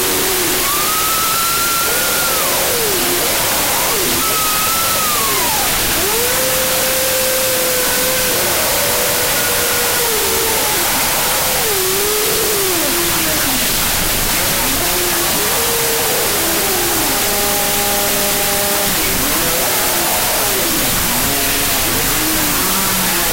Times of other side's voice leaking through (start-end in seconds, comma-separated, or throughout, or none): none